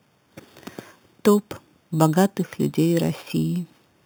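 Imaging from sample-and-hold upsampling runs through the whole speech clip. The sound points to an original rate of 8 kHz raised to 48 kHz by simply repeating each sample, with no smoothing filter. Mirror copies of the speech spectrum fold up around every multiple of 8 kHz. The lowest copy fills the 4 to 8 kHz band, about 20 dB below the speech. It is heard as a bright, metallic fizz that rises and falls with the voice.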